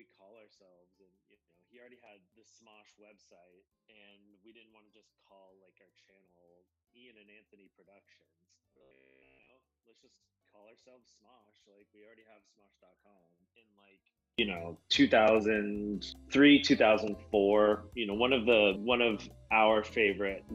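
From the very start until about 14.39 s, the level falls away by about 35 dB, leaving only a faint residue where the centred material should be. What's left sounds like just the difference between two nearly matched channels, so the likely cause is one channel inverted: with one side's polarity flipped, everything common to left and right cancels when they're summed to mono, and only the small mismatch survives.

Inside that stretch, from 8.73 to 9.49 s, the sound turns into a stiff, metallic buzz pinned at 66.8 Hz, still loosely tracking the underlying sound. That pitch points to a repeat period of around 15 ms, which is the signature of robotic sound from repeated short buffers, the likely cause here: new audio wasn't arriving fast enough, so the same short slice was replayed over and over while most of the real audio in that window was skipped.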